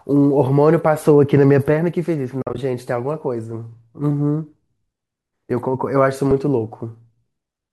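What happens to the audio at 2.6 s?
AAC frame loss with muting ends right around there: between 2.42 and 2.58 s about 90 ms of frames scattered across 160 ms were lost and the decoder zeroed them, so the speech fades out and back in more than once. The longest hole is about 50 ms and soft-edged.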